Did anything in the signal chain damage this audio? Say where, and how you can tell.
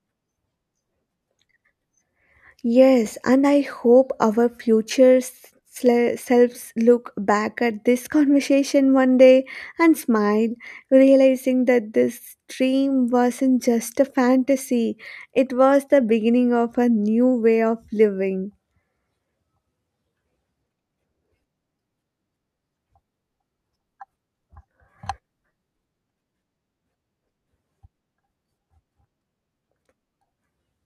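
No, nothing in the signal chain damaged this audio.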